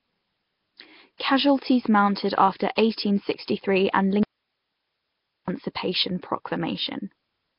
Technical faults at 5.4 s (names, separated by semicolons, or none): Nellymoser compression; audio dropout to a faint residue